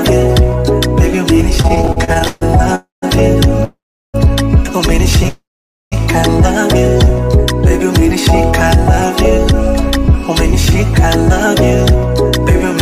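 From 1.61 to 2.43 s the sound catches and drags in a rapid stutter of thirteen brief stalls, the longest 137 ms, with repeated filler covering about 41% of that stretch, 337 ms in all, while nothing is actually lost. These repeated stalls (stutter) come from packets arriving late or more slowly than playback, so the jitter buffer kept running dry and the receiver stretched the last sound each time until fresh audio arrived.

Three call audio freezes follow, each a smeared continuation of the last sound that dies away into silence before the audio resumes exactly where it stopped. They run from 2.75 to 3.04 s (272 ms, 160 ms of it silent), from 3.64 to 4.16 s (494 ms, 380 ms silent) and from 5.28 to 5.94 s (633 ms, 500 ms silent). The likely cause is packets held up in transit that emptied the jitter buffer. The delay grew by each freeze's full length, so time was inserted rather than removed.

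From 9.52 to 11.30 s the sound runs slightly faster, at about 103% speed with unchanged pitch. This is jitter buffer speed-up. The buffer held more audio than its target, and the receiver shortened the latency by snipping out many tiny pitch-period slices in a row, around 70 ms in total, pulling playback back toward normal delay.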